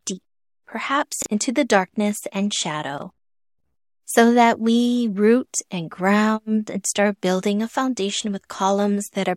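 At 1.22 to 1.26 s and again at 2.98 to 3.02 s, brief jumbles interrupt the speech: chunks out of order, each 20 ms piece arriving one chunk late and playing after its successor.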